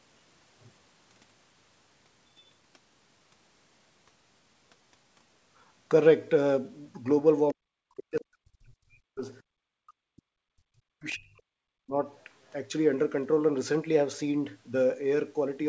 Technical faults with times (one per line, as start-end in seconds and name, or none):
7.48-7.53 other side's voice leaking through
7.51-9.25 speech suppressed in double talk
9.77-11.97 speech suppressed in double talk